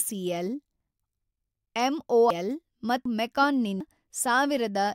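At 2.30, 3.05 and 3.80 s the speech jumps forward abruptly, each time dropping roughly a third of a second and butting the two sides together with no gap, which can clip part of a word. The even 0.75 s spacing is the giveaway: that's what's left of 1-second chunks once about 0.3 s goes missing at each handover. So this is most likely audio missing between chunks, with the recorder losing a slice each time it closed one block and opened the next.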